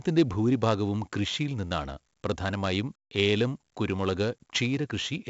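From start to finish the speech carries heavy 4-bit ADPCM compression damage. Each sample is coded as a coarse 4-bit step from a predicted value, and the error that leaves rides along with the signal, so every loud syllable drags a gritty hiss with it and sharp onsets crunch where the step size lags behind. Nothing comes through above about 7.7 kHz, which fits a 16 kHz sample rate and roughly 64 kbps.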